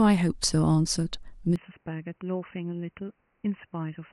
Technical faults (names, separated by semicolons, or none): input switched to a poorer device